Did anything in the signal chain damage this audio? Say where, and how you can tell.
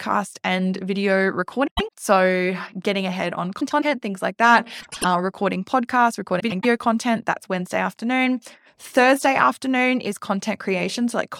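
Yes, there are frames out of order, most likely from the network or packet delivery stage. The speech garbles into a short flutter at 1.67–1.89 s, 3.60–3.85 s, 4.80–5.04 s and 6.39–6.65 s. Each time, two adjacent blocks of about 104.5 ms got swapped and decoded in the wrong order, which points to runs of a few codec frames each. No time goes missing; the halves just play back-to-front.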